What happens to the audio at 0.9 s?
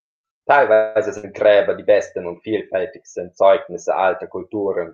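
A fading buzz is inserted into the speech from 0.73 to 0.97 s, a call audio freeze: likely delayed packets emptied the jitter buffer, and playback resumes intact.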